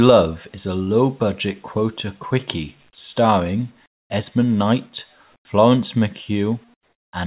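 Speech whose pauses at 3.86–4.10 s, 5.36–5.45 s and 6.74–7.13 s become flat, featureless comfort noise in place of the background, about 14–22 dB quieter, likely from discontinuous transmission.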